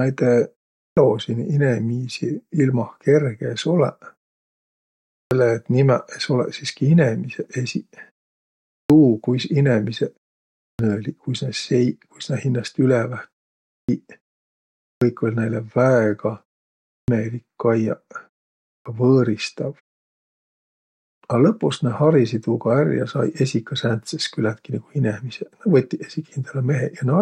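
At 0.78, 5.11, 8.7, 10.6, 13.69, 14.82, 16.91 and 18.66 s, speech resumes with its opening cut away: a clipped start after a pause. The output path drops into sleep during silences of 0.3 to about 1 s, and each time it takes roughly 170 to 200 ms to wake and lock again, so the first sounds of the next phrase are swallowed and it begins abruptly. Muted pauses, by contrast, only silence the background and never eat into speech.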